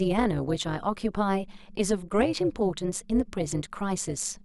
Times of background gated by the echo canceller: none

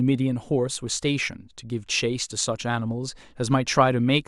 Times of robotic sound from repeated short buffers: none

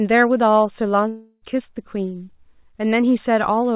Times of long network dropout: 1.08-1.44

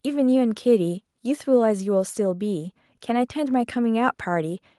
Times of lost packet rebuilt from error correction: none

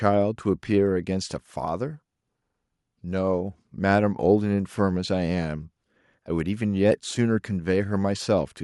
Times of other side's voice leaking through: none

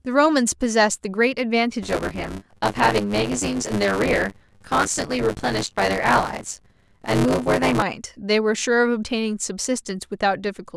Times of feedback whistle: none

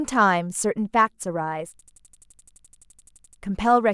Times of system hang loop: 1.79-3.41

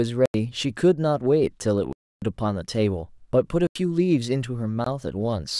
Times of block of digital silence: 0.26-0.34, 1.93-2.22, 3.67-3.75, 4.84-4.86

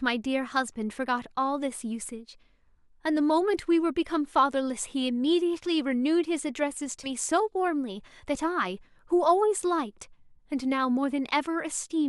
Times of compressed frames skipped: 7.03-7.09

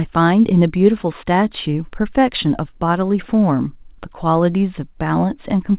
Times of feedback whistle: none

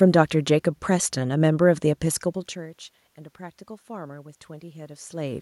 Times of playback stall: none

